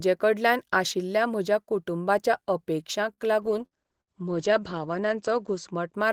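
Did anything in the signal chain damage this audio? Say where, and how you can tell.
Yes. At 3.13 to 3.21 s the speech briefly hangs: one sound is held for about 45 ms with a slight buzz or dip, then continues with nothing skipped. This is a short stall from a late packet, a network-stage fault. A packet missed its playout time and the jitter buffer ran dry. The receiver stretched the last sound while waiting and resumed exactly where it left off, so the playout delay grew by 45 ms.

From 3.43 s to 6.00 s the voice turns muffled and rough, losing its top end. This call bitrate drop sits in the codec stage, driven by the call's bandwidth estimate. The encoder was pushed from 32 kbps down to 11 kbps and held at the lowest rate for about 2.2 s. At that rate it codes coarsely and cuts the audio band from 20 kHz to 8 kHz, which takes away the crisp consonant detail.

Twice inside that degraded stretch, at 3.66 to 3.74 s and 4.01 to 4.10 s, a sound smears into a brief buzz or hiss that fades. 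Then the speech jumps ahead. Each is a burst of packet loss on the network. Several consecutive packets never arrived in time, and concealment extended the last sound for about 51 ms and 59 ms, turning it down as it went. About 60 ms of real audio is missing after each gap.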